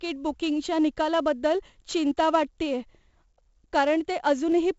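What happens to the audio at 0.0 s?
From the first instant at 0.0 s, the speech carries a gritty hiss that rides on every loud syllable and swells and shrinks with the level, while sharp attacks crunch with distortion. Nothing is heard above about 7.7 kHz, so the sound is dull. This is heavy 4-bit ADPCM compression running through the whole clip, which fits a 64 kbps stream. Each sample is coded as a coarse 4-bit step away from a predicted value. The resulting error noise tracks the signal's loudness, and the adaptive step size lags behind sudden transients.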